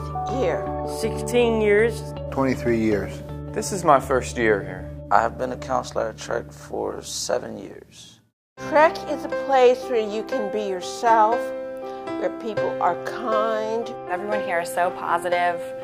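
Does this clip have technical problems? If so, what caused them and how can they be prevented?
No, the signal holds steady throughout, with no audible technical faults at any point.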